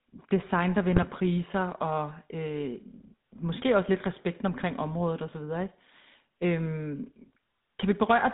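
Throughout, the speech carries GSM full-rate codec damage: a plainly buzzy, gravelly roughness within a 150 Hz to 3.7 kHz band, matching a 13 kbps stream. From 0.92 to 1.05 s, GSM bit errors corrupt the decoder's filter, pitch and gain values. The voice briefly squawks and gargles, pointing to roughly 1% bit errors across several frames.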